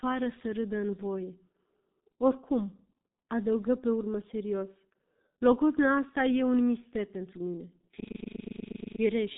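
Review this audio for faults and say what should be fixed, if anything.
The whole clip carries G.723.1 codec damage: nothing above 3.8 kHz, and coarse 30 ms frame modelling leaves the speech muffled and hoarse, which fits a rate near 6.3 kbit/s. Prevent it by using a wideband codec such as G.722 or Opus at a higher bitrate.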